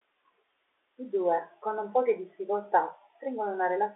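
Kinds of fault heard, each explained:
Nothing here counts as a fault: the speech simply has the narrow, boxed-in sound of an ordinary G.711 phone line, with the band running from roughly 300 Hz to 3.6 kHz, just as that telephone coding should sound.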